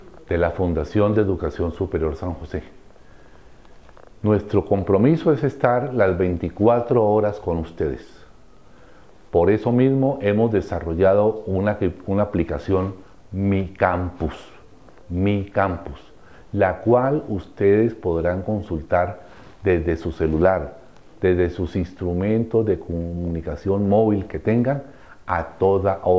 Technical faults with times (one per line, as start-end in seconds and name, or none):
none